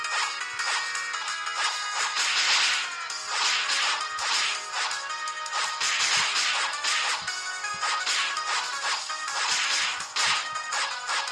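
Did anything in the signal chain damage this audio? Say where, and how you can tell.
Yes. A skip ahead at 1.21 s points to the network and jitter-buffer stage. Playback jumps forward abruptly, with roughly 0.4 s of audio missing and the two sides butted together with no gap, so everything after that point arrives about 0.4 s earlier than it should. A dropout or packet-loss concealment would leave silence or a smeared fill in place of the missing audio. Here nothing fills the hole, which fits queued audio being discarded when the buffer overflowed.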